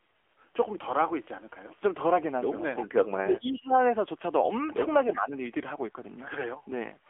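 The whole recording passes through the AMR narrowband mobile codec. Nothing above roughly 3.6 kHz survives, and the plainly synthetic, buzzy coding of the speech fits a low mode around 7.4 kbps. The vocal-tract model rebuilds the voice from sparse pulses and discards fine detail.

From 2.76 to 2.86 s, and again from 3.24 to 3.38 s, a faint delayed copy of the speech appears, roughly 15 dB down and trailing by 340 ms. This is an echo leak, likely from a far-end loudspeaker whose echo canceller let residue through.

Between 3.16 and 3.73 s the talker's level sags by up to about 20 dB for around half a second, and a shallower dip of about 10 dB follows at 5.15 to 5.31 s. Both fit speech suppressed in double talk: the canceller turned everything down while both sides spoke at once.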